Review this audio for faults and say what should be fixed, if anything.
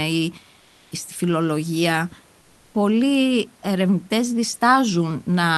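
Comfort noise in place of the background runs from 0.59 to 0.91 s, just before "στη φιλολογία". For 320 ms the real room background gives way to a steady, featureless hiss, about 1 dB different in level. The likely cause is Opus discontinuous transmission: the sender stopped sending in the pause, and the receiver synthesised noise to fill it. To prevent this, disable DTX on the sending side so the true background is always transmitted.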